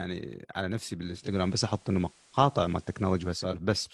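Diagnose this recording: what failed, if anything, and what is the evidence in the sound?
Digital radio blending to analogue at the receiver: from 0.99 to 3.62 s the speech cross-fades over 0.42 s to FM, with hiss roughly 30 dB down and the level shifting by about 2 dB.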